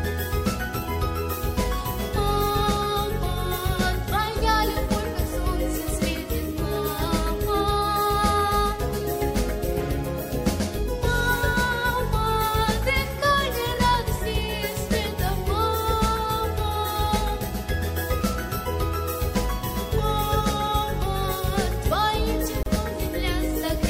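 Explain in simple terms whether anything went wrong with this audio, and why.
The audio was encoded in separate pieces that were then joined without trimming the silent padding each encoding run adds. This leaves a gap at a join of encoded pieces: from 22.63 to 22.66 seconds, a 34-millisecond gap with softened edges opens before the sound carries on.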